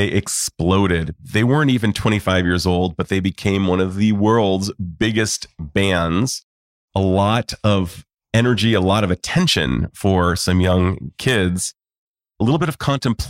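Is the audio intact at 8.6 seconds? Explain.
Yes, the speech at 8.6 seconds is intact, with no dropout, click, distortion or other fault at that moment.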